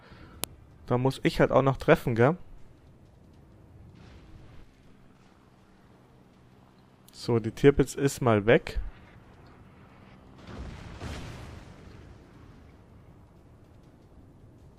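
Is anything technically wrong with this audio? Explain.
Yes. A file header played as audio at 0.44 s: a WAV header left in place where pieces were joined is decoded as a few dozen samples, so a sharp, loud click breaks through regardless of what the sound is doing at that moment.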